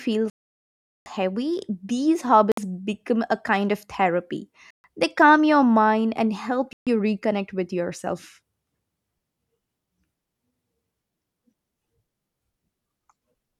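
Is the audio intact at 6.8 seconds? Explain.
No. From 6.73 to 6.87 s a Bluetooth stall cuts the speech to silence, likely from a drained headphone buffer; the waveform goes flat and the spectrogram shows a blank column.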